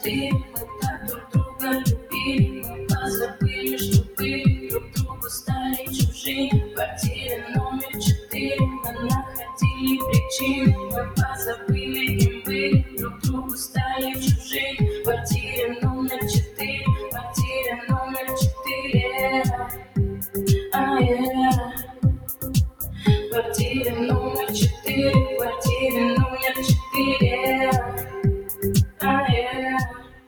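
From the start, the whole sound carries a grainy, rough distortion that shifts with the signal, turning gritty in quiet passages and sputtering as levels fall. The error sits roughly 35 dB below the signal and tracks it. That behaviour likely comes from low bit depth without dither, consistent with an 8-bit signal that was rounded rather than dithered, so each small level change lands on a coarse step.

Throughout the clip, the level also pumps and flutters by about 10 dB. Sustained parts and decaying tails thin out while sharp onsets mostly pass. This is a noise suppressor applied to music or sounds: a processor tuned for speech is treating steady, held material as noise and repeatedly pulling it down.

That suppressor cuts the sound hardest in six stretches: 0.42 to 9.52 s, with about 3 s of it dipping as much as about 13 dB; 11.06 to 14.5 s, about a second affected, down about 11 dB; 15.75 to 18.63 s, about half a second, down about 11 dB; 19.63 to 20.28 s, down about 14 dB; 21.76 to 23.05 s, down about 13 dB; and 28.03 s to the end, under a second in total, down about 14 dB. 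In each, held or fading sound sinks or has its decay clipped short while sudden attacks still come through.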